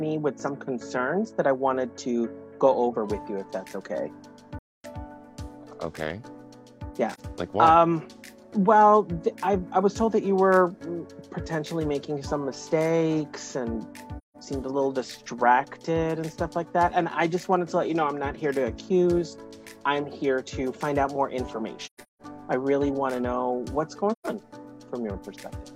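AAC frame loss with muting leaves soft-edged silent holes at 4.58–4.85 s, a brief dip at 7.13–7.20 s, and holes at 14.18–14.36 s, 21.86–22.22 s (scattered gaps, the longest around 150 ms) and 24.12–24.27 s. Zeroed spectra fade out and in, appearing as blank vertical bands on a spectrogram and tapered dips in the waveform.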